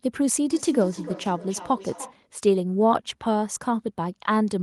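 From 0.51 to 2.21 s the speech comes back at a regular interval of roughly a third of a second, peaking about 13 dB below the talker: feedback echo between two devices, where a nearby device's playback re-enters the microphone. Unlike room reverberation, the repeats are discrete and evenly spaced.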